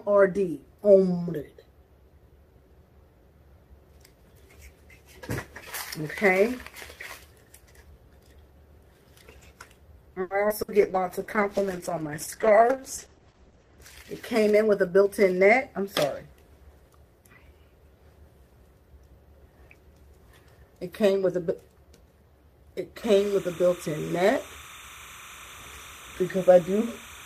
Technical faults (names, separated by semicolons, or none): short stall from a late packet; short concealed packet loss; burst of packet loss; call bitrate drop; jitter buffer slow-down; jitter buffer speed-up; timecode bleed